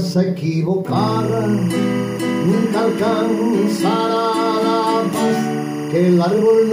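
From 0.96 s to the end, timecode bleed: linear timecode leaking in from an adjacent track or cable, sitting roughly 20 dB under the sound. Unlike a steady whine or hum, it's a chirping warble flipping between pitches near 1 and 2 kHz, cycling at 23.976 frames per second.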